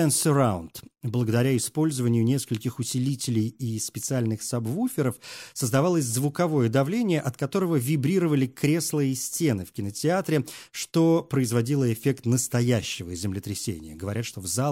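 No technical faults can be heard anywhere in this recording.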